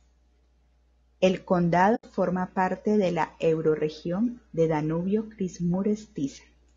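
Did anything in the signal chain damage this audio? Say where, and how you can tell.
Yes. At the codec stage, the speech sounds rough and grainy throughout, with noise filling the gaps between harmonics and a thin, synthetic top band. This is likely low-delay AAC compression at a low bitrate, around 32 kbps. On a spectrogram, harmonic lines look smeared and the upper band looks patchy.

Further along, in the network or decoding stage, there is AAC frame loss with muting from 1.95 to 2.04 s. It is a soft-edged gap of about 80 ms, which fits a few lost codec frames that the decoder zeroed. The waveform tapers smoothly to silence and back, and the spectrogram shows a clean vertical blank.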